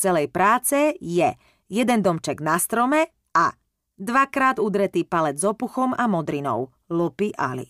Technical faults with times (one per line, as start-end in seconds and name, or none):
none